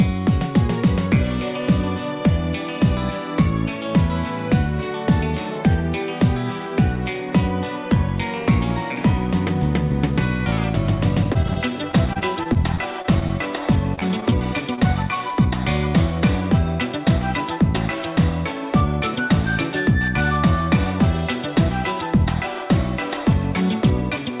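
From 11.24 to 13.32 s the sound turns choppy, with a rapid series of tiny dropouts, none longer than about 29 ms, that are papered over with a continuation of the preceding sound. It recurs more densely from 13.96 to 14.33 s. This is repeated packet loss: audio kept arriving late or not at all, and each hole was filled by extending the preceding sound before the next hole hit. About 12% and 18% of those stretches are synthetic fill.

At 14.75 to 14.79 s comes a single brief smear, a wobble lasting about 40 ms where the sound seems to hang for an instant before rejoining. This is short concealed packet loss. Roughly 20 ms of audio never reached the decoder in time, and the receiver covered it by continuing the last sound and crossfading back into the real signal. Throughout, the telephone-band character, with nothing above 4 kHz, fits a G.711 mu-law call path.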